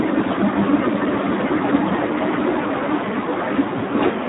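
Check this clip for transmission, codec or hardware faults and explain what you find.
There's one fault, and it runs the whole clip: Speex codec damage. The speech is squeezed into a phone band of roughly 150 Hz to 3.7 kHz, with nothing above 3.8 kHz. Starved of excitation bits, which fits about 8 kbps, it comes out hoarse, noisy and edging toward robotic.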